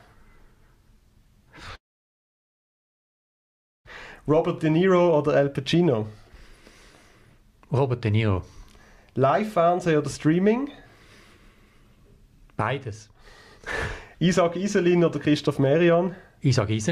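A long network dropout runs from 1.75 to 3.88 s: the sound briefly trails off into near-silence for about two seconds, likely because incoming packets stopped, then resumes with that stretch missing.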